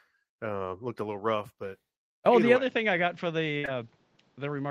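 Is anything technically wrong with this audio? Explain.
Yes, there are three faults.

From 2.57 s to the end, the speech abruptly turns duller and a little quieter, with nothing above 7.4 kHz and a faint new background noise. There is no gap at the change. The likely cause is that the input switched to a poorer device with a narrower passband and its own noise floor.

From 3.57 to 3.66 s there is a burst of packet loss. About 60 ms of audio never arrived, and the receiver filled the hole by extending the last sound and fading it down. This produces a held, decaying tone or hiss, and the speech then resumes further along.

Immediately after, from 3.66 to 3.69 s, there is a short concealed packet loss. About 20 ms went missing and was synthesised from the preceding signal, then crossfaded into the real audio. It is heard as a brief smear or wobble that lengthens the disturbance from the burst just before.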